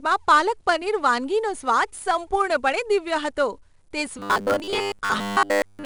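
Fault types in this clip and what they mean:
4-bit ADPCM compression, throughout: each sample is coded as a coarse 4-bit step from a running prediction, so a gritty hiss rides on every loud stretch of the speech and sharp onsets distort. The damage is plainly audible, which fits a data rate near 89 kbps.
Robotic sound from repeated short buffers, from 4.19 s to the end, right after "સંપૂર્ણપણે દિવ્ય હતો તે": the speech turns into a rigid metallic buzz at 100 Hz. This is likely caused by one 10 ms slice being replayed in place of late audio, with most of the real material skipped.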